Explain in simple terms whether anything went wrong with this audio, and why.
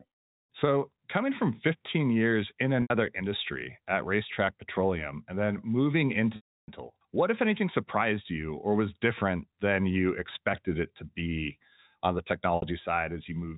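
Three brief glitches stand out. At 2.82 s, just after "years in", and at 12.56 s, just after "to be on the", the sound briefly holds with a slight buzz for about 60 to 80 ms. At 6.36 s, after "and then moving", a longer 0.32 s gap fades into silence before "what if anything surprised" returns. These are packet loss with pitch repetition: pieces of the transmission went missing, and the receiver filled each gap by repeating and fading the last bit of sound.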